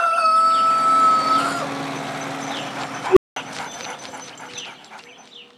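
An unstable filter, a recursive filter whose coefficients push its feedback past the point of stability, takes over the audio at 3.10 s: a tone of around 400 Hz swells to clipping within about 66 ms, then the output overflows and drops to silence for about 198 ms until 3.36 s.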